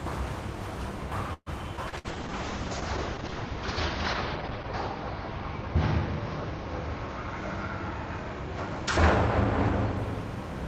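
At 1.33 s the audio stalls: the last sound is stretched out and fades, ending in about 50 ms of silence, and at 1.49 s it resumes where it left off. The whole pause is 130 ms and nothing is lost. This is a call audio freeze, likely from packets held up in transit so that the jitter buffer ran dry and the receiver had to extend what it had until delivery resumed.

At 1.76 s the sound jumps forward. Around 70 ms of audio is gone, and only about 10 ms of filler bridges the two sides. This skip ahead happens when the receiver drops a stretch that has arrived while later audio is already queued, which cuts the built-up delay.

From 1.89 to 1.95 s there is a brief smear. A short concealed packet loss left a 60 ms hole, which the receiver covered with 29 ms of synthesised continuation before blending back into the real signal.

Starting at 1.90 s the audio turns coarse and loses its top end. This is a call bitrate drop. 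The encoder fell from 32 to 8 kbps after the bandwidth estimate collapsed, and the audio band shrank from 20 kHz to 8 kHz. The lowest rate lasts 2.46 s, and the sound clears by 10.03 s.

From 1.98 to 2.07 s a burst of packet loss takes out 60 ms. The receiver fills 58 ms by carrying the last sound on and turning it down, then resumes further along.

From 2.12 to 3.96 s the audio runs slightly slow, at 96% speed with unchanged pitch. This is a jitter buffer slow-down: the receiver repeats tiny slices of signal, adding 72 ms in total, to rebuild its reserve.

From 7.41 to 8.68 s a jitter buffer speed-up pushes the audio to 105%, which sounds hurried. The receiver trims short pieces, roughly 70 ms in all, to shed excess buffered delay.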